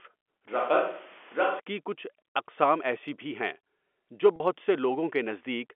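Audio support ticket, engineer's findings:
Close mic signal likely dropped, likely fallback to a distant pickup, 0.48 to 1.60 s. Switch to a distant microphone: sudden hollow, roomy tone with thinner bass, level roughly 5 dB down, room noise near 25 dB below speech, abrupt return.

Packet loss with pitch repetition, 4.36 to 4.40 s. About 40 ms of the stream lost, which fits two 20 ms packets. Receiver concealment repeated the last pitch period across the gap, giving a brief held, buzzy tone before the signal resumes.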